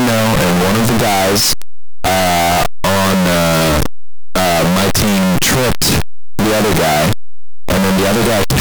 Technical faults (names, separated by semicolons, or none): signed and unsigned mixed up